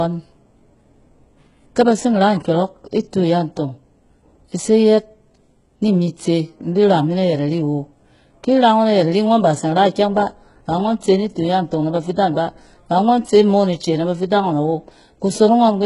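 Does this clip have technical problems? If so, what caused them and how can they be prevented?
Yes. HE-AAC compression runs through the whole clip and is the likely cause of the heavy damage. Only the lower band is truly coded, and the treble is rebuilt from copied lower bands. That leaves sibilants gritty and lispy, with nothing at all above 11.1 kHz, which fits a very low bitrate around 12 kbps. To prevent it, record or send the speech with a higher-bitrate codec or uncompressed.

Clock slip clicks tick from 0.17 s to 15.62 s, roughly every half second. Two unsynchronised clocks likely drift apart by a few tens of parts per million, so a single sample is dropped or repeated each time the error adds up to a whole sample. To prevent it, lock both devices to one shared clock or resample with drift compensation.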